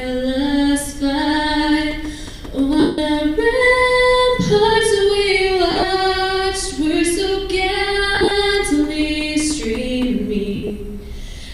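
Four spots of lost LE Audio frames. The worst is 2.80 to 2.98 s, a solid 180 ms gap that fits eighteen 10 ms frames. The LC3 decoder keeps replaying the last spectrum with scrambled signs, so the sound smears into noise and fades. Shorter scattered losses follow at 5.71 to 5.83 s (longest run around 50 ms), 8.15 to 8.31 s (around 30 ms) and 10.56 to 10.70 s (around 70 ms), each a brief noisy blur.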